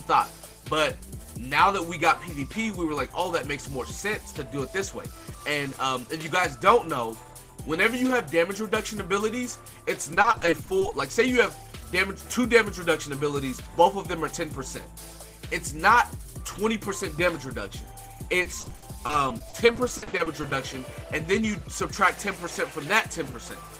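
The audio has two bursts of repeated packet loss (robotic sound), at 10.14–10.92 s and 18.42–20.52 s. Many short holes, up to 30 ms and 50 ms, get filled by extending prior sound. About a quarter to a third is patched, giving choppy texture.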